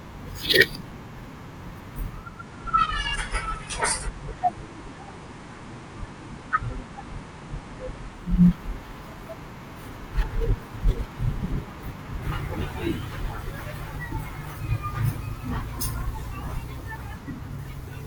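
At 2.11 s the receiver loses its digital signal and cross-fades over about 0.43 s to the FM analogue broadcast, a digital radio blending to analogue, returning at 8.51 s. Meanwhile the speech carries a faint hiss roughly 30 dB down, with no level change.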